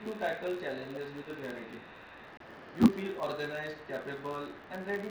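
A steady buzz near 93.8 Hz runs through the whole speech, rising and falling with its level. This is a filter restarted on every block: each block, which fits a 512-sample size, starts from silence with a tick, unlike a constant hum.

From 1.11 to 1.17 s and again from 1.38 to 1.64 s the voice dips by about 10 dB. These are likely speech suppressed in double talk.

At 2.37 to 2.41 s, a hard-edged 30 ms hole opens, with no fade or fill. That is unconcealed Bluetooth headset packet loss, which fits four lost frames over the mSBC link.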